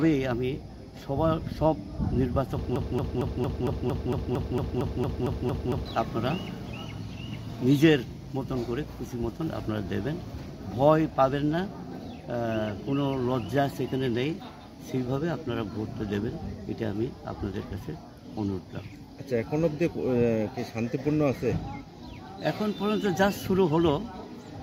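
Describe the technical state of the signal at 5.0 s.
At 5.0 s the signal is caught in a broken-record loop, running from 2.76 to 5.86 s. A 228 ms fragment repeats exactly, back to back, fourteen times. The likely cause is a stalled stream resending its last fragment.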